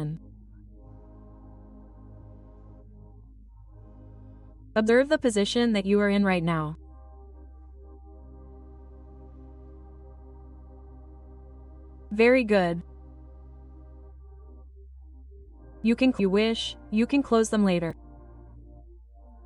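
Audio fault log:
2.21 s, 4.88 s, 16.19 s and 17.90–17.92 s: damaged data in a compressed stream. Corrupted bytes make the decoder misread frames and lose sync, producing brief glitches of 20 ms or less. They appear as thin broadband vertical streaks on a spectrogram and as sharp discontinuities in the waveform.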